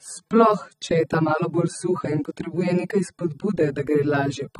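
Throughout the speech nothing sounds above 15 kHz, yet the artefacts are far heavier than a large MP3 file should carry. That mismatch marks low-bitrate audio saved at a high bitrate, likely from a roughly 24 kbit/s AAC source whose damage re-encoding cannot undo.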